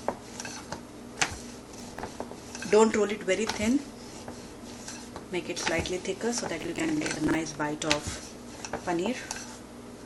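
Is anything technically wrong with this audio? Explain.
Yes. Processor overload crackle appears from 1.70 to 2.16 s and again from 6.61 to 7.35 s. The processor repeatedly misses its buffer deadlines, so stale fragments of roughly 10 ms each replay with hard edges. The result is a gritty tearing over the sound, rather than one isolated click or dropout.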